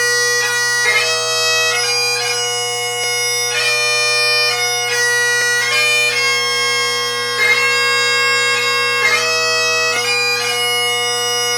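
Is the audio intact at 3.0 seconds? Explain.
No. At 3.04 s there is a single sharp click, a thin vertical line across the spectrum. The likely cause is dropped samples: about 0.7 ms of the stream is missing, so the waveform jumps abruptly to a later value without removing any audible sound.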